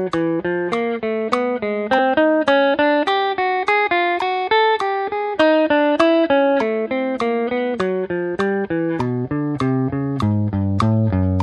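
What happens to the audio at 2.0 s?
At 1.98 s the audio jumps ahead: compressed frames are skipped, so roughly 50 ms of sound never plays, which fits about two dropped 26.1 ms frames. The overlapping neighbouring frames blur the join into a brief smeared blip, not a hard click. On a waveform the envelope steps abruptly to a later level, and a spectrogram shows a thin vertical smudge where the time patterns fail to line up.

Throughout, including this moment, the audio carries plainly audible MP3 compression damage, likely from encoding at a low bitrate around 64 kbps. It sounds watery and swirly, with a dulled top end. A spectrogram shows the treble cut off flat at a fixed frequency and sparse high-frequency patches flickering on and off.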